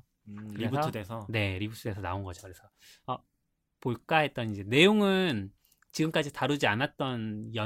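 No dropouts, clicks, distortion or timing glitches turn up anywhere in this speech recording; there is nothing to flag.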